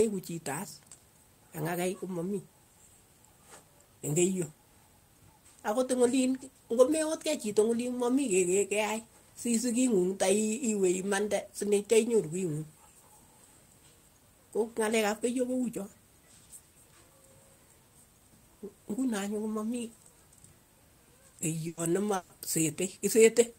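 At 21.67 s a burst of packet loss begins. About 100 ms of audio never arrives. The receiver stretches the last sound and fades it out, so a held buzz or hiss covers the gap. Near its end, from 21.77 to 21.79 s, a lost packet is rebuilt from error correction. That 20 ms sounds rougher and noisier, because a low-bitrate copy is played in its place. Speech resumes at 21.80 s with that stretch missing. A second burst of packet loss runs from 22.15 to 22.32 s. It is longer, with about 140 ms concealed the same way. From 22.29 to 22.31 s, another 20 ms packet is rebuilt from the error-correction copy. It is grainy.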